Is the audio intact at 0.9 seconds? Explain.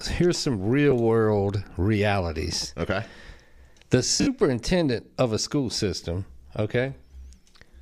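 No. From about 0.91 to 0.93 s there is a brief dropout from lost LE Audio frames, and it sounds like a single 10 ms frame went missing. The LC3 decoder filled the gap by repeating the previous spectrum with randomised phase signs, so the speech turns into a short noisy smear. On a spectrogram the harmonics blur into broadband grain for that slice; on the waveform the cycles lose their regular shape for those few milliseconds.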